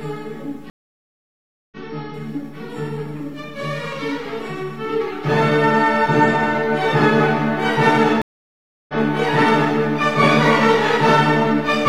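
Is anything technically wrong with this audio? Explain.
Yes, there are two stream reconnects, at 0.7 to 1.77 s and 8.22 to 8.94 s. Each time the connection dropped, giving a silent gap of about 1.02 s and then 0.67 s. A fresh decoder then picked up mid-stream, so the sound jumps ahead, skipping roughly 0.7 s.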